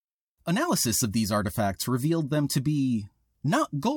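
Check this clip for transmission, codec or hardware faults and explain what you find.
Nothing here points to a problem with the transmission, the codec or the hardware, so there's nothing to flag in this bit of speech.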